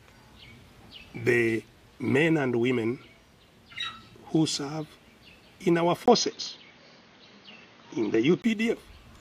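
At 6.06 s a 20 ms gap, then dull, boxy sound cut off above 6.6 kHz, a level shift of about 5 dB and new faint noise. The input likely switched to a poorer device, until 8.44 s.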